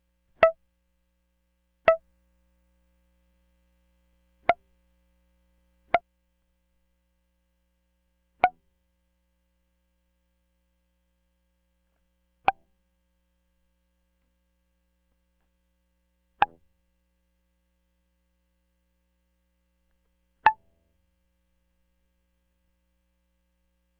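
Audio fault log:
1.85–6.01 s, doubled audio track: a second full-band copy of the music runs about one and a half seconds behind, at roughly the same level. It has no decay or room colour and starts and stops abruptly, likely from a second capture path or a misaligned edit.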